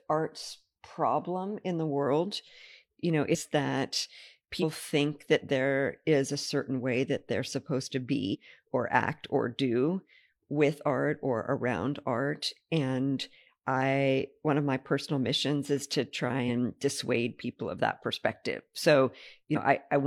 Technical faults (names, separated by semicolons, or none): damaged data in a compressed stream